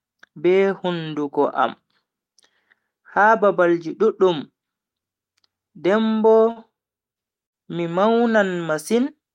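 Short stalls from late packets occur at 6.37 to 6.42 s and 6.51 to 6.59 s. Each time, the jitter buffer ran dry waiting for a packet, so the last speech was stretched for 18 ms, then 48 ms, before resuming without loss. The held sound buzzes or dips slightly, and the delay grows each time.

A burst of packet loss follows at 7.46 to 7.55 s. About 60 ms of speech was lost, and the receiver filled 57 ms by extending and fading the previous sound into a brief buzz or hiss before jumping ahead past the missing stretch.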